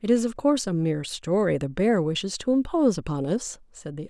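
Nothing technical goes wrong anywhere in this bit of speech, so there's no fault to point to.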